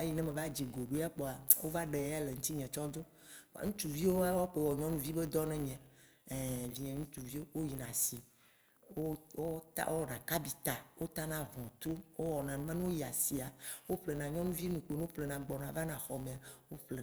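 Throughout the clip, a filter restarted on every block: it drops its stored state at each block boundary and begins again from silence. Each restart leaves a small transient, producing a 100 Hz buzz that rises and falls with the speech level, which fits blocks of about 10 ms.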